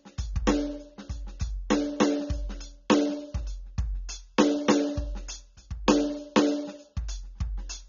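Throughout the music, nothing is present above 7.1 kHz, leaving it dull and smeared with a fizzy, warbling texture on sustained tones. This is likely AAC compression at a low rate, around 24 kbps, discarding upper frequency bands to stay within its budget.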